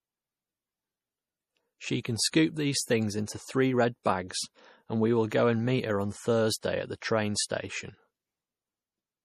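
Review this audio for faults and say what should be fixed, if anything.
The whole clip has a watery, swirly quality, and the consonant hiss gets a metallic chirp to it. That's most likely MP3 compression. The damage is plainly audible, which fits a low bitrate somewhere around 40 kbps. The encoder clearly ran short of bits: the top end is cut off with nothing above 15 kHz, and the weaker frequency detail flickers in and out from frame to frame, smearing the edges of the speech. To prevent it, keep the master lossless or export at a much higher bitrate.

There's also a short pre-echo from 2.31 to 2.33 s, right before "these things". For about 29 ms you get a short hiss ahead of the attack, and the onset itself sounds a bit soft. The attack landed late in a transform block, so quantisation noise sized for the loud part spread back into the quiet stretch just before it. Encoding at a higher bitrate, or with a codec setting that switches to short blocks on transients, would keep that noise tucked behind the attack.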